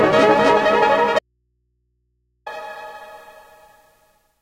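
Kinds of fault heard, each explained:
Audio dropout to a faint residue: the sound cuts off abruptly at 1.19 s and returns just as suddenly at 2.46 s, leaving a gap of about 1.27 s that holds only a low mains hum around 50 dB below the normal level. The likely cause is a lost signal feed into an input that stayed live. On a waveform, the envelope collapses to a near-flat line with sheer edges. A spectrogram shows a blank band crossed only by thin, steady hum lines at the bottom.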